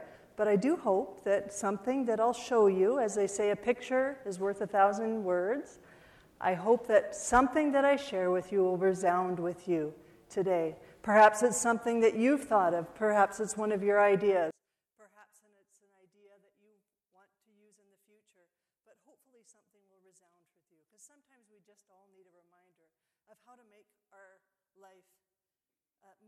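From 14.51 s to the end, the sound collapses by about 36 dB. One channel inverted is the likely cause. Shared content cancels when summed to mono.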